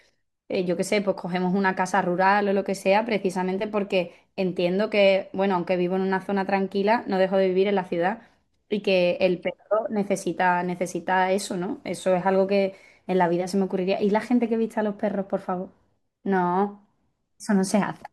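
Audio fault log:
No audible faults detected.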